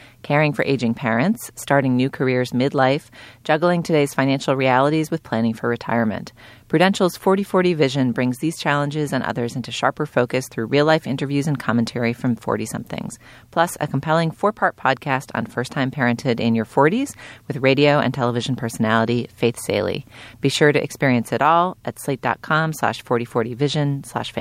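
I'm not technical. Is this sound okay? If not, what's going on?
Yes, nothing in this speech recording points to a technical problem with the signal.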